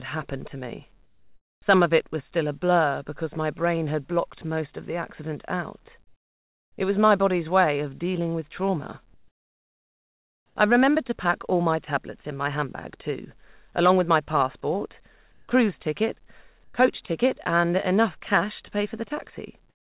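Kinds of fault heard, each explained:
Comfort noise in place of the background: the sender likely stopped transmitting during pauses, and the receiver filled each gap with synthetic noise. At 1.04, 6.04, 15.32 and 16.64 s the real background gives way to a flat, featureless hiss, up to about 7 dB quieter.
Onset clipped by the voice detector: the sender's detector was likely slow to notice the sound resuming at 6.76 s. Its first 20 ms never arrived, and comfort noise stood in, so the sound begins abruptly, without its soft attack.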